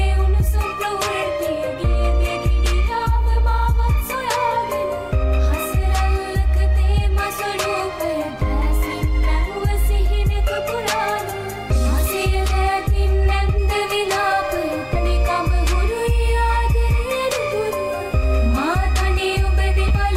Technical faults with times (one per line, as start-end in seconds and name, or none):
11.75 compressed frames skipped
13.58-20.16 switching supply whistle
14.95 compressed frames skipped
19.88-19.91 compressed frames skipped